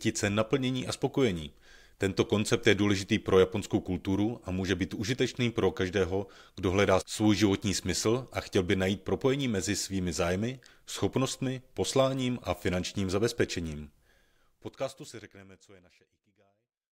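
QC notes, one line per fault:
No faults found in the speech clip. The end is a deliberate smooth fade out that eases the level down from around 14 s to silence at 16.9 s.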